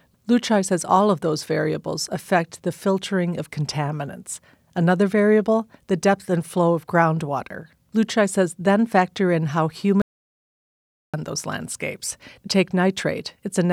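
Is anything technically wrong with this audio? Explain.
Yes. From 10.02 to 11.14 s, right after "then factor in how" and before "those landscapes", there is an audio dropout to silence lasting about 1.1 s. The input was likely lost while recording continued, writing zeros. The speech cuts off abruptly with no room tone. The waveform shows a flat line and the spectrogram a blank band.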